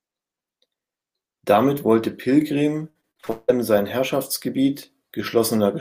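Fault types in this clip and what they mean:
Repeated packet loss (robotic sound): The speech breaks up between 2.89 and 3.50 s as seven losses arrive in quick succession. Each hole is papered over by extending the preceding sound, so about 0.37 s of that 0.61 s span, some 61 percent, is concealment rather than real signal. With the longest gap at 176 ms and the holes packed closely, the result is choppy speech with pieces missing.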